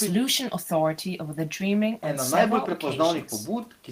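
Nothing goes wrong anywhere in this bit of speech, so there's no fault to point to.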